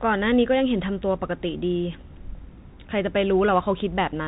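Bluetooth CVSD headset codec damage runs through the whole of this speech clip, from start to finish, and it is plainly audible. The sound is held to a narrowband ceiling of 4 kHz, with nothing above it. A single up-or-down bit per sample and an adaptive step, consistent with a 64 kbit/s CVSD link, cannot keep pace with loud high-frequency energy. The s sounds come out scratchy and distorted, and a granular hiss sits under the speech.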